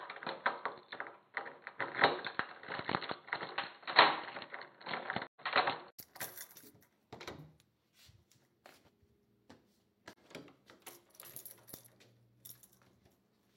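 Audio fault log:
0.00–5.99 s, input switched to a poorer device: The sound is dull and boxy, with nothing above 4.3 kHz. A faint added noise sits roughly 40 dB under the signal. At 5.99 s a silence of about 80 ms comes before the band opens up and the level shifts by roughly 5 dB. The likely cause is the recording moving between input devices. The narrower device cuts the top end and brings its own noise and gain.
5.26–5.41 s and 10.13–10.18 s, AAC frame loss with muting: The sound fades out and back in, a soft-edged hole the first time and a brief dip the second. The first gap lasts 128 ms, which fits three lost frames. The second lasts about 43 ms, which fits one. The decoder zeroed the spectrum of each missing frame. The overlapping windows then blend the silence smoothly into the surrounding audio, so the edges taper rather than snap.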